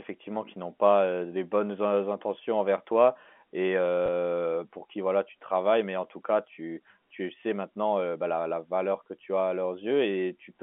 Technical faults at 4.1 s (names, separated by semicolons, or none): packet loss with last packet repeated